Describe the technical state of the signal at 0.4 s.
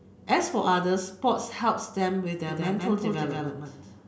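At 0.4 s the speech signal is intact, with no dropout, clipping, distortion or other fault audible at that moment.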